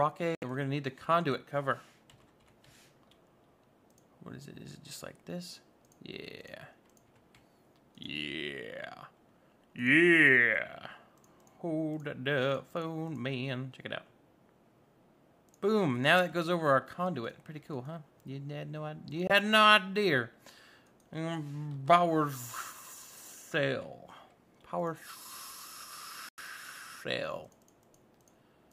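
The audio cuts out to silence three times: at 0.35 to 0.44 s, briefly at 19.27 to 19.31 s, and at 26.29 to 26.39 s. Each gap lasts roughly 70 ms, 23 ms and 93 ms. The sound then resumes further along, as though it had kept playing through the hole. This is likely a Bluetooth dropout, where packets arrived too late for the headphones and were discarded rather than played.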